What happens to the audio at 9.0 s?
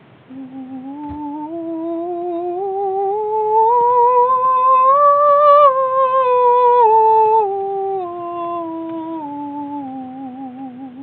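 At 9.0 s the music plays through intact, with no dropout, click, distortion or other fault at that moment.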